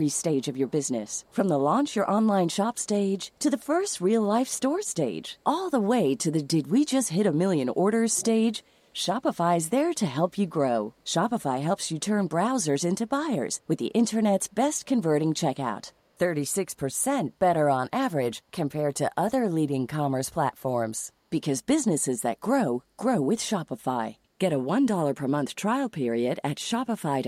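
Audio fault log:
0.70–0.89 s and 1.09–1.35 s, echo leak: the far end's echo canceller likely let a trace of its loudspeaker pickup through, so a faint copy of the speech returns 356 ms late, sitting far below the direct voice as a barely audible ghost.
8.12–8.25 s, echo leak: the far end's echo canceller likely failed again to strip its loudspeaker pickup, and the leaked speech returns with the same 356 ms delay but noticeably stronger, about 25 dB under the voice, as a short delayed scrap.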